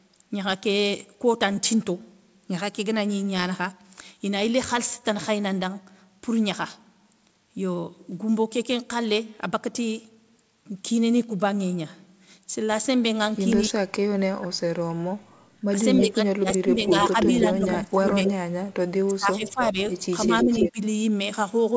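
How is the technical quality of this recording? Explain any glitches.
The recording has clear technical problems in its second half, all from the echo canceller of a speakerphone call. The sound is band-limited to 8 kHz throughout, which fits a G.722 call codec at 64 kbps.

Speech suppressed in double talk occurs from 13.69 to 15.14 s, 15.71 to 18.32 s and 19.07 to 20.8 s. The echo canceller likely mistook the near talker for loudspeaker echo while both sides spoke and turned everything down. The voice drops by about 40, 30 and 20 dB over roughly a second, a second and a half, and under a second.

Background gated by the echo canceller appears from 15.46 to 15.61 s. While the loudspeaker played, the canceller clamped the microphone, so the room sound dips by about 11 dB for roughly 150 ms and returns once the canceller releases.

Echo leak runs from 15.96 to 18.33 s and from 20.21 to 20.71 s. 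The canceller likely failed to remove all of the loudspeaker sound its microphone picked up. A copy of the far voice comes back about 320 ms late, about 5 dB below the speech the first time and at roughly equal level the second.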